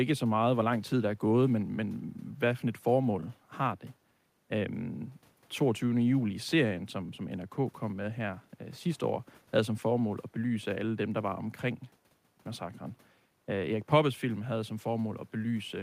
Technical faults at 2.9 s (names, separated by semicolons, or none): none